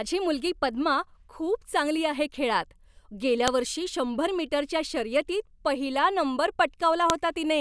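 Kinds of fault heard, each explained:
File header played as audio: a sharp, loud snap lands at 3.48 s, between "चांगली आहे खेळात गेल्या" and "वर्षी शंभर मीटरच्या", and again at 7.10 s. Each lasts only a millisecond or so and sounds wholly unrelated to the speech around it. That points to the bytes at the start of a joined audio piece being read as samples. Unlike a dropout or buffer click, nothing is missing from the speech on either side; the burst is simply inserted at a join.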